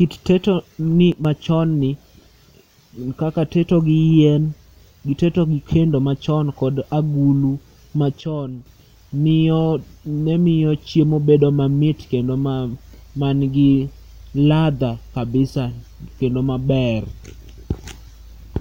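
At 1.12 s the level drops by about 6 dB and stays down until 1.25 s, then returns. A second, deeper drop of about 9 dB runs from 8.21 s to 8.66 s. Each is a sudden gain jump: speech and background noise fall together in a single step, with no fade in or out. The likely cause is a digital gain setting applied instantly rather than ramped, so the whole signal changes level from one sample to the next.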